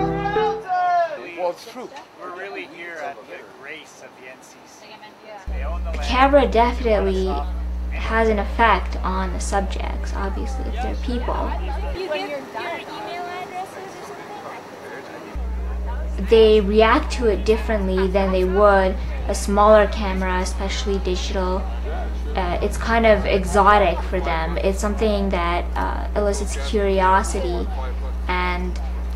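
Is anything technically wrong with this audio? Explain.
Yes, there's one small glitch worth flagging. At about 6.33 s you get a single sharp click, and it looks like dropped samples. A tiny fraction of a millisecond of the stream has most likely gone missing, so the waveform leaps straight from one value to a later one instead of moving smoothly between them. That gap is far too brief to swallow any sound, so all you hear is the click, and on a spectrogram it shows up as a thin vertical line.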